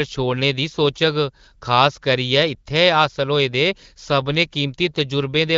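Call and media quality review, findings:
Nothing to log on this one: the speech comes over the AMR wideband (HD Voice) link with only the light coding you'd expect from it, and nothing needs a ticket.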